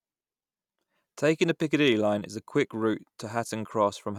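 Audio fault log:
No technical fault is found anywhere in the speech signal.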